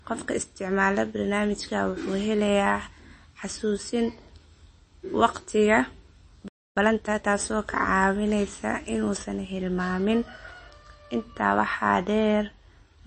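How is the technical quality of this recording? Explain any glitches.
The recording has several clear faults. Plainly audible compression damage runs throughout, the treble is too strong for most of the clip, and there is one dropout followed by a hurried stretch.

MP3 compression affects the whole clip. Nothing is heard above 8.3 kHz, and the speech has a watery, swirly texture. This likely comes from MP3 encoding at a low bitrate, around 32 kbps. The encoder cut the treble and dropped weak detail to save bits.

Pre-emphasis was left on from the start until 9.17 s. The highs are boosted by about 10 dB at 10 kHz relative to 1 kHz, which matches a 50 µs FM curve. The matching de-emphasis was never applied. The speech sounds thin, bright and sibilant.

A playback stall runs from 6.48 to 6.77 s. The sound stops dead for about 0.28 s, then resumes. The likely cause is that the player ran short of data or was briefly blocked, so its output fell silent.

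Time-compressed catch-up follows from 6.77 to 7.33 s. The audio plays at about 1.5 times normal speed while keeping its pitch. The player is cutting and cross-fading small pieces to clear its backlog. This leaves a rushed sound.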